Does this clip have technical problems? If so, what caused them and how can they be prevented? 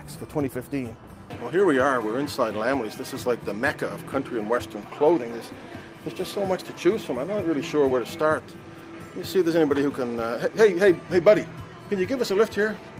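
Yes. Clock drift between sender and receiver runs through the whole clip. The sending clock is fast by about 4 percent, so the jitter buffer keeps overfilling and the receiver has to throw audio away to hold its latency steady. On a waveform this appears as timing slightly squeezed against the natural rhythm, with no lasting gaps. Locking both ends to a shared reference clock, or resampling adaptively at the receiver, would prevent it.

Repeated timing corrections run from 0.01 to 12.99 s. The receiver keeps trimming short pieces, always in the same direction, so the sound plays at about 104 percent of its natural pace, with faint hiccups at uneven intervals. A spectrogram would show small vertical seams at irregular spacing where segments were cut out. Using smooth time-scale adjustment instead of abrupt cuts would keep these corrections inaudible.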